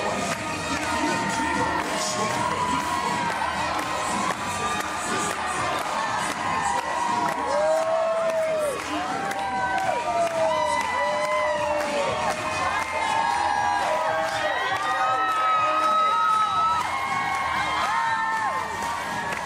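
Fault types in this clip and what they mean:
No technical faults can be heard anywhere in the audio. Nothing in the sound points to a problem in how it was captured, processed or delivered.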